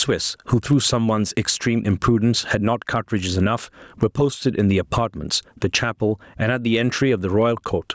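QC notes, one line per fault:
Throughout, gain pumping: the gain swings by about 15 dB under each loud sound, so the speech sounds squashed and flat. The likely cause is input gain set far too high, making a fast limiter clamp down constantly.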